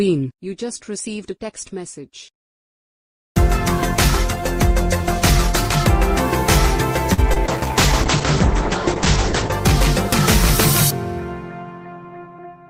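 Around 7.13 s a packet arrived late and the jitter buffer ran dry, so the receiver stretched the last sound for about 43 ms until it came in at 7.20 s, then carried on from the same point. This short stall from a late packet loses nothing but holds a sound too long, with a faint buzz or dip, and leaves playback about 43 ms later than before. Right after, two packets never reached the decoder in time, at 7.34 to 7.38 s and again at 7.46 to 7.50 s. Each hole of roughly 20 ms was filled by continuing the preceding sound before blending back into the real signal, which is short concealed packet loss. Both spots come across as a quick smear or wobble, and a brief transient there can disappear. From 7.46 s the call's bandwidth estimate fell and the encoder was told to cut its bitrate from 48 kbps to 10 kbps, holding the lowest rate for about 2 s before recovering at 9.58 s. This call bitrate drop forces much coarser coding and narrows the audio band from 20 kHz to 8 kHz, so the sound turns muffled and rough or watery throughout that stretch, losing its top end until the bitrate climbs back.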